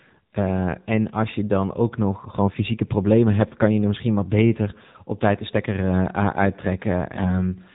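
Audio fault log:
Throughout: AMR narrowband mobile codec. The speech passes through the 2G/3G mobile codec at 7.4 kbps, plainly audible: nothing above 4 kHz survives, and the low bitrate leaves the vocal-tract model driven by sparse pulses, so the voice sounds buzzy and synthetic.
2.75–2.80 s and 7.16–7.35 s: AMR bit errors. After "dan ook nog gewoon" and before "problemen hebt kan je", then again near the end, flipped bits in the weakly protected part of the frames misplace the excitation pulses and skew fine pitch and gain values. Pitch and level hold roughly steady but turn hoarse and gargly.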